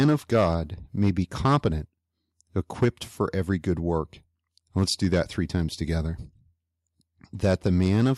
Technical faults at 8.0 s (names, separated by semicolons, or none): microphone overload